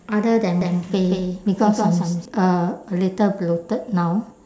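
A slower second capture path likely adds a doubled audio track from 0.61 to 2.25 s: a dry copy trails about 200 ms behind, roughly 5 dB down, cutting in and out abruptly.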